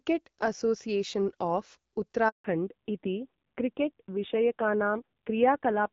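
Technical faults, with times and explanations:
2.28–2.44 s, handover gap: the call switched networks and no speech frames arrived for 160 ms, so the voice cuts off abruptly into silence.
2.44–5.93 s, fallback to narrowband: the link dropped from HD Voice to a narrowband codec at a low rate, so nothing above 4 kHz remains and the voice sounds duller and rougher.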